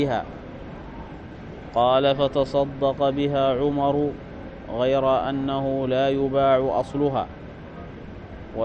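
No technical faults can be heard anywhere in this clip.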